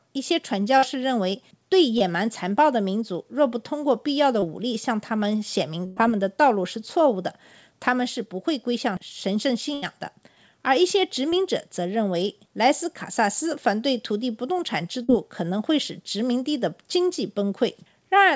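At 0.78 to 0.84 s a burst of packet loss removes about 40 ms of speech. The receiver extends the last sound and fades it, giving a held buzz or hiss before the speech resumes further on. The same happens at 5.86 to 5.98 s, where about 100 ms goes missing, and at 9.74 to 9.84 s, where about 80 ms goes missing.

Short concealed packet loss appears at 1.98 to 2.02 s, 4.40 to 4.44 s and 11.30 to 11.34 s, each about 20 ms, and at 15.04 to 15.10 s, about 40 ms. The decoder patches each gap from the preceding sound, so each is heard as a brief smear or wobble. The call path's band limit at 8 kHz, which fits a G.722 wideband codec, is present throughout.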